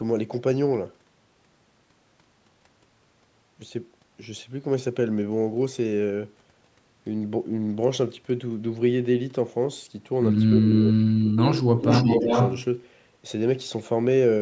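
From 10.57 to 11.39 s the speech sinks and breaks into pieces, dropping by as much as about 35 dB for roughly 0.7 s in total. It happens again from 11.56 to 11.87 s, and there is a brief, shallow dip of about 5 dB at 12.03 s. This pattern is likely speech suppressed in double talk. With both ends talking at once, the echo canceller couldn't tell this talker from the loudspeaker return, so it turned everything down.

Laid over those gaps is a delayed copy of the speech, arriving about 360 ms late. It appears as a short scrap at 10.62 to 10.7 s, a quieter one at 11.4 to 11.57 s, and then a longer stretch from 11.82 to 12.65 s. In that last stretch the copy is roughly as loud as the speech itself. This echo leak likely comes from a far end on a loudspeaker whose canceller let part of its microphone pickup return down the line.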